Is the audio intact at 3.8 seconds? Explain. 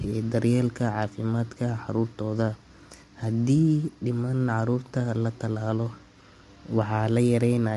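No. Low-delay AAC compression runs through the whole clip, including 3.8 s: the speech sounds rough and grainy, with nothing above 11.6 kHz, likely from AAC-ELD's short frames blurring pitch harmonics at a rate that fits about 32 kbps.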